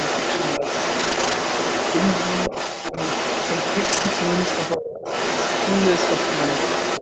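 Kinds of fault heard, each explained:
Other side's voice leaking through: A second voice runs under the talker from the start to 4.77 s and again from 4.95 s to the end, at roughly the same loudness as the main speech. The likely cause is a loudspeaker on the talker's device whose output the echo canceller failed to strip from the microphone signal. The two voices compete almost evenly throughout, so the far-end sound is not a faint trace but a full partner in the mix.
Lost packet rebuilt from error correction: Twice, a series of separate packets went missing and the decoder filled the hole from the lower-quality backup copies that Opus carries inside the following packets. This happens from 0.99 to 1.33 s, about 180 ms rebuilt, and from 3.85 to 4.07 s, about 120 ms. There is no silence, but those stretches turn grainier and noisier than the speech around them, as if briefly coded at a much lower rate.
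Speech suppressed in double talk: From 4.76 to 5.05 s the talker's speech is pushed sharply down, by roughly 25 dB at its deepest, over about 300 ms. This falls right where the leaking far-end voice returns, so both sides were likely talking at once, and the echo canceller, unable to tell its own talker from the echo, clamped the whole signal. The talker briefly dips before recovering.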